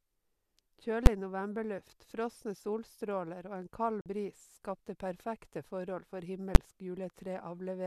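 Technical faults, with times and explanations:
1.06 s and 6.55 s: invalid numbers at full scale. Each time, a calculation produced infinite or invalid values that were pinned to the largest possible sample value for a 10 ms block. A block that short is heard as a single sharp, very loud bang rather than as a pop at each edge of a silent gap.
4.01 to 4.06 s: digital broadcast dropout. The receiver lost the incoming stream or rejected corrupted frames and muted until valid data resumed, leaving a 48 ms hole of silence. The length fits two lost frames, and the speech in that gap is gone.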